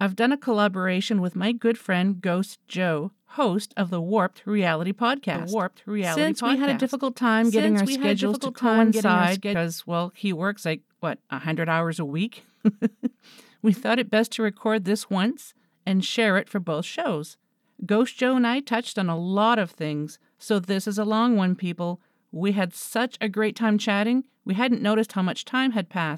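From 5.3 to 9.5 s, just before "well he works like", the speech is doubled: a dry second copy trails about one and a half seconds behind, roughly 5 dB quieter, starting and stopping abruptly. Likely a second capture through a slower path mixed back in.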